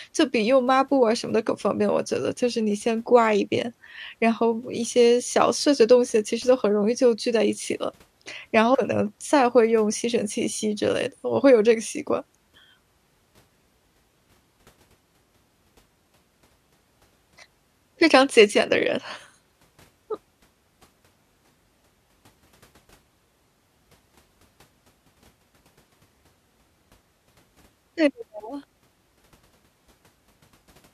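Brief glitches at 1.49 and 8.73 s, each about 20 ms, come from damaged data in a compressed stream: corrupted bytes derail the decoder until it resyncs.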